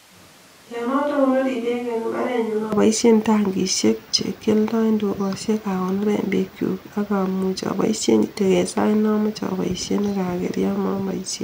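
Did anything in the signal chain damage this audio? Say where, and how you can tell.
Yes, a switch to a distant microphone from the start to 2.72 s: the speech is hollow and roomy, thin in the bass, roughly 10 dB quieter, with audible room noise. It snaps back to close, full sound at "aboishen tangishek", likely a failed or missing close-mic capture feed.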